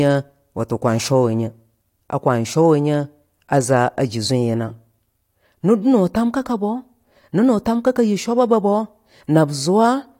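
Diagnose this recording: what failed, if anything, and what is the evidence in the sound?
Nothing failed in this speech recording, and no stage from the analogue wiring through to playback leaves any mark on the sound. There is no moment at which the audio gives evidence of a fault.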